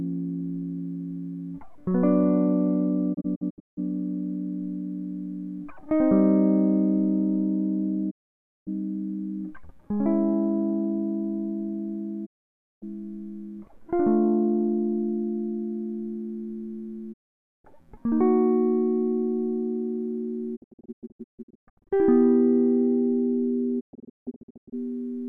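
The music suffers digital broadcast dropout: the receiver lost valid frames and muted, so the sound fades out within about 20 ms and goes silent. There are holes at 3.13–3.79 s (scattered), 8.09–8.69 s, 12.25–12.84 s, 17.12–17.66 s, and scattered gaps at 20.55–21.93 s and 23.79–24.74 s. The music sent during each gap is lost.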